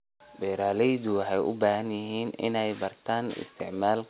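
Nothing stood out on listening to this speech, which comes through a telephone-style call path that keeps nothing above 4 kHz.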